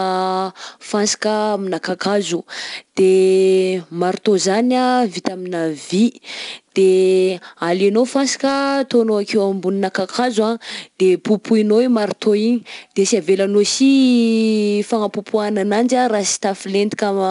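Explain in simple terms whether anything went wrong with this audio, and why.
The speech was stored with 4-bit ADPCM compression throughout, each sample only a rough step from a guess, so loud parts sound gritty and dull.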